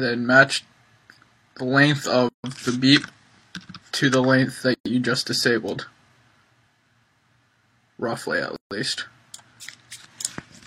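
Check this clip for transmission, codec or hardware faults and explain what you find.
Three dropouts interrupt otherwise continuous sound, each a gap at a join of encoded pieces: 2.29 to 2.44 s (about 153 ms), 4.74 to 4.86 s (about 116 ms), and 8.56 to 8.71 s (about 148 ms). The pieces were encoded separately and joined without trimming, so the padding in each piece's last frame and the encoder's start-up delay in the next remain as silence. The sound stops and resumes exactly where it left off. On a waveform each gap is a flat line. On a spectrogram each is a clean vertical blank band across all frequencies, its edges slightly smeared by the codec.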